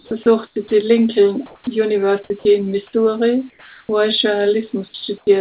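Right at the start, 0.00 to 0.11 s, the opening is sound dropped by the voice detector: about 60 ms of speech is lost and steady hiss sits in its place, likely because the detector heard that quiet onset as background. From 0.47 to 0.71 s the real background gives way to comfort noise, a flat synthetic hiss, likely because sending paused in a gap. At 0.68 to 0.71 s a 30 ms scrap of speech is swallowed the same way. At 1.46 to 1.67 s there's more comfort noise in place of the background, about 3 dB louder than the real room tone it replaces, which itself sits about 37 dB below the loud parts. Between 2.24 and 2.45 s the sound is chopped by the voice detector: it flips on and off, likely misjudging quiet syllables, so the speech stutters. Comfort noise returns at 3.50 to 3.89 s, here about 4 dB quieter than the background, which is about 31 dB down. At 4.88 to 4.94 s around 50 ms of speech drops out, with comfort noise running on to 5.27 s, both likely detector decisions. 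Everything is band-limited to 4 kHz by the G.711 A-law call path.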